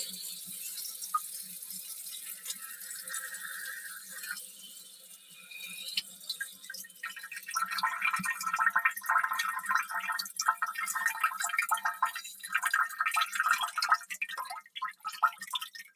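Across the whole clip the level pumps and flutters, with sustained parts and tails sinking while attacks mostly get through, swinging by something like 15 dB. A noise suppressor tuned for speech was left on the sound, so it treats held tones and ambience as noise. In four places the sound is cut by the noise suppressor. From 0.06 to 3.1 s the steady material dips by up to about 7 dB. It sinks by up to about 10 dB from 3.86 to 5.56 s, by about 9 dB from 6.03 to 6.69 s, and by about 8 dB from 6.88 to 7.03 s. Each time the suppressor mistook the held or fading sound for noise and pulled it down harder than the rest.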